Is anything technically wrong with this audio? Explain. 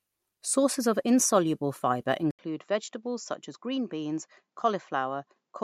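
Yes. At 2.31 s the recording likely switched its input to a poorer device, which stays in use to the end. The new path carries nothing above 7.6 kHz, so from that point the speech loses its top end and sounds duller and more boxed-in. An 80 ms silence marks the changeover, the level drops by roughly 5 dB, and a faint new background noise appears well below the speech.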